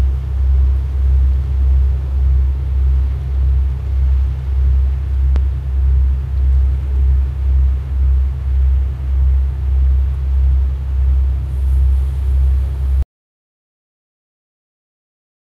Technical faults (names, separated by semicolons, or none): loud pop; audio dropout to silence